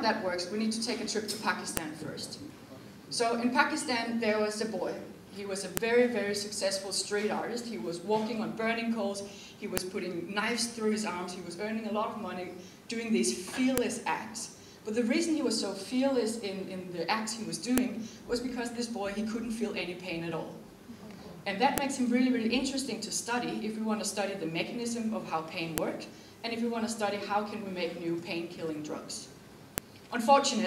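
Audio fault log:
1.77, 5.77, 9.77, 13.78, 17.78, 21.78, 25.78 and 29.78 s: file header played as audio. Sharp snaps recur every 4.0 s, where joined pieces still carry their headers and those bytes play as samples. The clicks ignore the signal's level and content, unlike clipping or dropout glitches.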